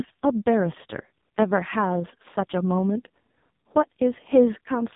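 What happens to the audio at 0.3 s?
At 0.3 s the speech sounds buzzy, thin and heavily synthetic, with nothing above 3.8 kHz, and the damage runs through the whole clip. This is the AMR narrowband mobile codec at its harshest, consistent with roughly its lowest 4.75 kbps mode, rebuilding the voice from a crude vocal-tract model and sparse pulses.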